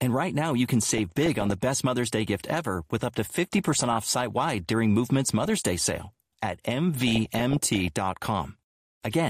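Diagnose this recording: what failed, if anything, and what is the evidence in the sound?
Bursts of burbling break out over the speech four times: from 0.68 to 1.53 s just after "right now you", from 3.44 to 4.42 s after "ever with up to", then 5.25 to 6.10 s and 7.07 to 7.88 s. This is DAB burbling at the reception and codec stage. Weak reception lets bit errors, in the region of half a percent, slip past error correction into the MP2 data. Corrupted samples then put short blips of noise in single sub-bands, and corrupted scale factors make individual sub-bands jump in level for up to a frame.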